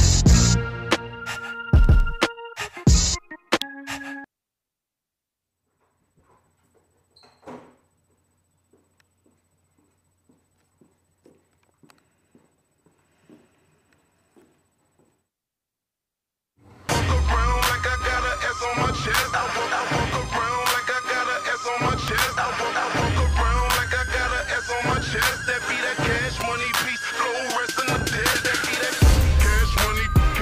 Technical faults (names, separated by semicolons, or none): electrical switching spike